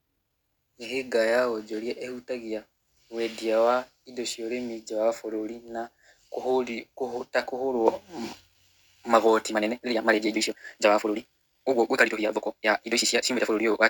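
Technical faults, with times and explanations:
9.47 to 13.89 s, time-stretched section: software likely squeezed this final stretch into half its length, playing it at 2.0 times speed and keeping pitch by dropping short slices of audio. The speech abruptly rushes ahead at an unchanged pitch through the end.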